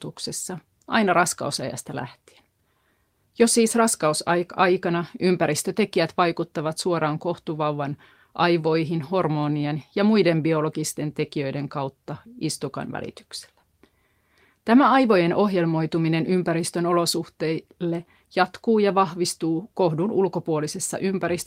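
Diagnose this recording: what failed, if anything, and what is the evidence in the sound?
Nothing failed; no stage from capture through playback leaves an audible defect anywhere in this speech recording.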